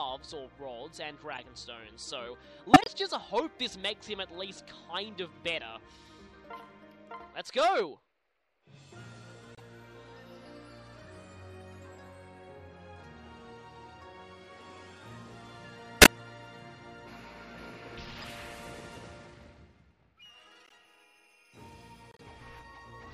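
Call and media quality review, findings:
Corrupt frame decoded at 1.32–1.39, 2.73–2.88, 9.53–9.61, 16.01–16.09, 18.16–18.24, 20.65–20.72 and 22.11–22.21 s. Short chirps and noise blips, loudest near 2.7 and 16.0 s. The decoder played damaged frames, misreading gains and codes and placing energy at wrong frequencies.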